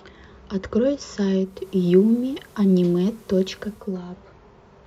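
At 1.37 s the speech blends from digital radio to analogue FM over about 320 ms, returning at 3.99 s. With the digital stream lost, hiss roughly 35 dB below the speech appears, and level shifts about 1 dB. A spectrogram shows a broadband floor filling the gaps between syllables.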